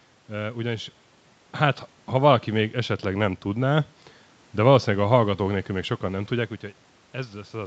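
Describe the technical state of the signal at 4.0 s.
At 4.0 s the signal is intact, with no fault audible at that moment.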